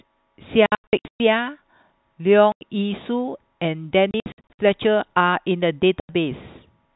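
Packet loss filled with silence strikes four times. From 0.66 to 1.2 s and again from 4.11 to 4.59 s, packets go missing in scattered bursts, with runs up to 120 ms and 60 ms. Single 90 ms gaps follow at 2.52 s and 6.0 s. Every hole's length fits 30 ms packets, replaced with pure silence, so the speech is chopped with hard-edged dropouts, while the G.711 telephone band carries through the intact parts.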